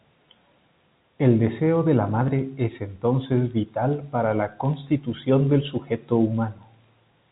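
Speech, with nothing technically wrong to report.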